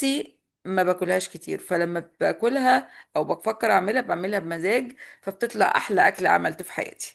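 No technical faults can be heard anywhere in this speech recording. The Opus voice compression leaves only light traces, and the speech keeps its full bandwidth, which fits hybrid coding at a moderate rate of about 24 kbps.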